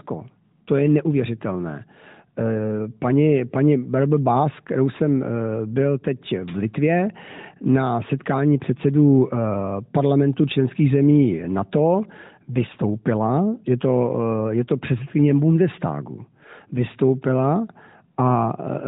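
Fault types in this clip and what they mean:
No faults can be heard anywhere in this speech clip.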